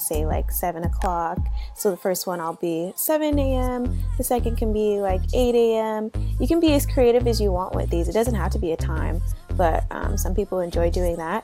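No technical faults are audible.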